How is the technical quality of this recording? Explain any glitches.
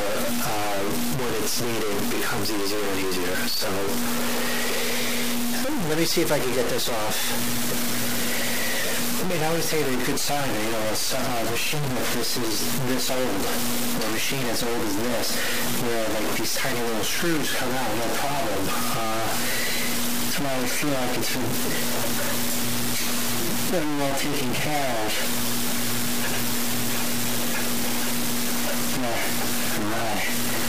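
Technical quality is poor: the whole recording carries heavy grainy distortion that tracks the sound from start to finish. This is low bit depth without dither, likely from the signal being truncated to about 3 bits. With so few levels, the error follows the waveform, sitting only about 5 dB below the signal. Quiet passages turn harsh and gritty, and the faintest parts sputter between steps or drop to silence.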